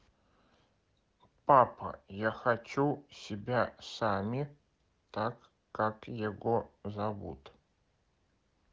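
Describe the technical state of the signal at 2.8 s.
At 2.8 s the speech comes through intact, carried by the AMR wideband (HD Voice) codec at 18.25 kbit/s with no audible fault at that point.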